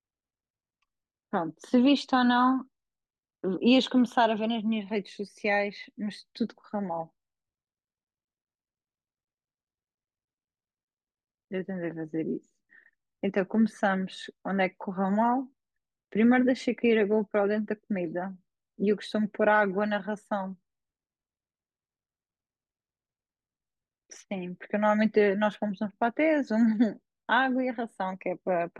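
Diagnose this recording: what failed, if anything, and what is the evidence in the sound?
Nothing in the chain failed: the speech carries no audible fault at any stage from capture to playback.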